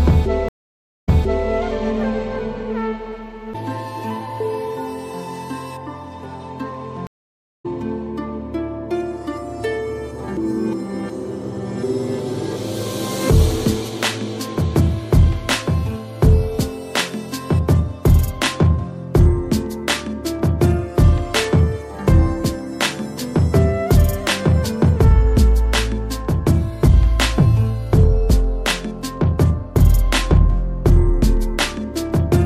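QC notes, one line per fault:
0.49–1.48 s: stream reconnect. The audio drops out for 0.55 s while the connection restarts. A fresh decoder then resumes 0.44 s earlier, so a short stretch repeats.
7.07–7.66 s: stream reconnect. A 0.51 s silence follows the connection break. Playback resumes roughly 0.4 s later, so a short stretch of sound is skipped.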